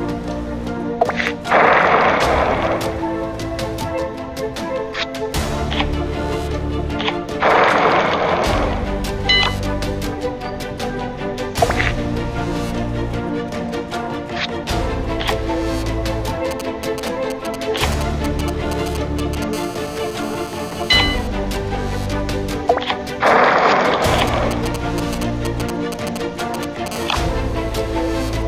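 From 16.51 to 19.44 s, GSM signalling bursts break in: a nearby 2G phone's intermittent radio bursts are rectified by the audio circuitry, producing a galloping dit-dit-dit of short buzzes at 216.7 Hz, roughly 10 dB below the signal. At 19.53 to 21.28 s this becomes steady GSM phone buzz, a continuous raspy 216.7 Hz tone rich in harmonics, about 16 dB down, as the phone holds a call. The same pattern returns: signalling bursts from 24.19 to 26.88 s, louder at around 5 dB below, then steady buzz from 26.91 to 28.43 s at about 19 dB below. The bursts are broken and rhythmic, while the call buzz runs unbroken.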